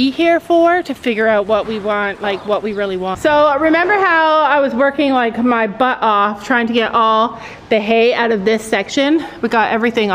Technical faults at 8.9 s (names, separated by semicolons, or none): none